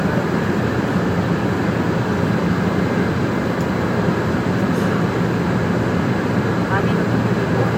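The sounds carry a USB whine throughout: a fixed 1 kHz tone, strongest at the 4 kHz harmonic, about 30 dB below the signal, from 1 ms bus-frame current leaking through power or ground.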